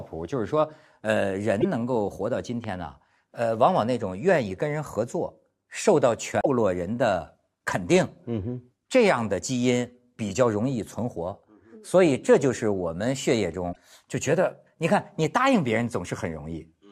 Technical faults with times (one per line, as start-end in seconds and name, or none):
1.57-1.65 damaged data in a compressed stream
2.64-2.66 loud pop
6.40-6.46 damaged data in a compressed stream
13.69-13.77 damaged data in a compressed stream